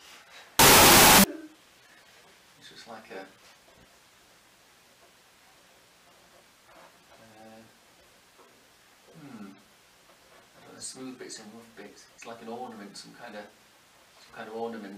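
From about 0.59 to 1.24 s there's a wrong sample width fault: the audio sounds like 16-bit samples read back as unsigned 8-bit bytes. Mismatched bytes turn into loud hiss with the sound buried underneath, slowed to half speed, so it drops in pitch.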